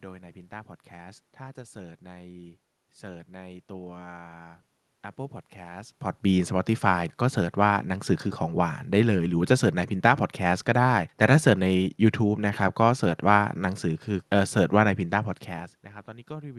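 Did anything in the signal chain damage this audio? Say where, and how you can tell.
No, nothing in the signal chain has damaged this speech. It has passed through a call codec whose top end stops at about 12 kHz, consistent with Opus at around 32 kbps, and the level shifts near 5.5 s and 15.5 s are the talker moving relative to the microphone against the room noise.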